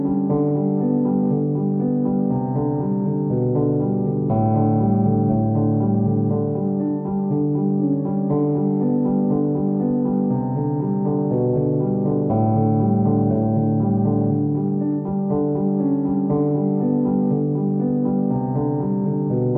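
The recording of sounds carries no audible technical fault at any point, and the signal stays intact and continuous throughout.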